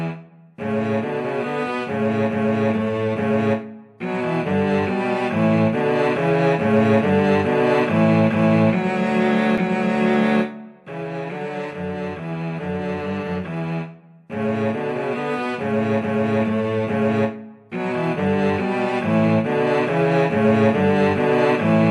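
At 9.57 s a block of digital silence, about 2.7 ms long, fits a missed 128-sample buffer; the abrupt drop and return produce a single sharp tick.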